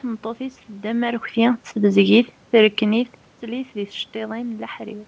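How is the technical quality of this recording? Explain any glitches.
The technical quality of this recording shows no glitches to explain.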